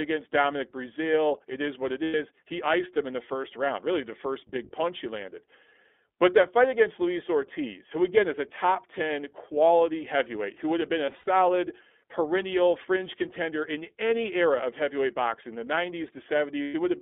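From the start the speech sounds thin, a little rough and faintly synthetic, with nothing below about 250 Hz or above 3.5 kHz. This is the iLBC codec: a narrowband VoIP coder that codes each frame's excitation independently, and the plainly audible coarseness points to its 20 ms frame mode at about 15.2 kbps, squeezed through a telephone-style band.

At 2.04 s, right after "is what it", the speech briefly turns into a held, buzzy vowel for about 100 ms. The same happens at 11.06 s after "who would have been", where the stalls are scattered over about 200 ms, the longest run around 70 ms. It happens again from 16.62 to 16.74 s, for about 120 ms. These are lost iLBC frames. The decoder filled each gap by repeating the last pitch cycle mixed with noise, and because the frames are self-contained, clean speech resumes almost immediately after each gap.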